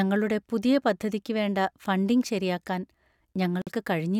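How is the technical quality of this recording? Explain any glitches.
One glitch is audible. At 3.62 s a 51 ms gap opens in the speech, until 3.67 s. This is a gap at a join of encoded pieces. Two separately encoded sections were joined untrimmed, leaving encoder start delay and end padding in place. The edges are smeared. Speech then resumes where it stopped.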